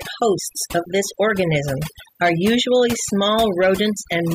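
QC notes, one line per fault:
throughout, overdone noise removal: the denoiser was pushed too hard, so the background drops and breaks up into twinkly specks.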